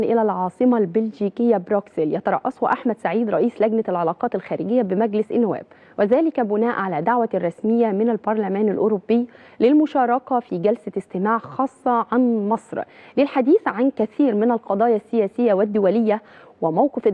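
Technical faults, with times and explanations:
No technical faults detected; nothing to log.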